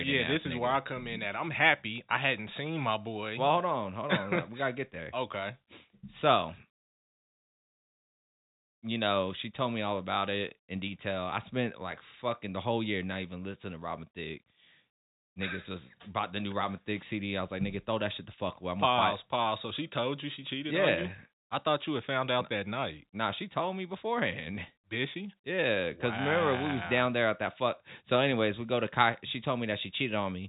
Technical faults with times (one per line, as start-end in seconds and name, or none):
none